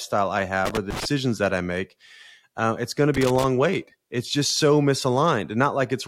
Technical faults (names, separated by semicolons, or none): block size mismatch (truncated); loose connector crackle